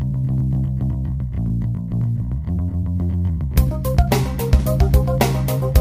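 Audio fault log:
Throughout: sample clock jitter. A fine hiss and roughness rides on the sound. It swells on loud, bright passages and drops away in quiet gaps. The converter clock wanders by several microseconds, so steep waveform slopes get mistimed, leaving error about 30 dB below the signal.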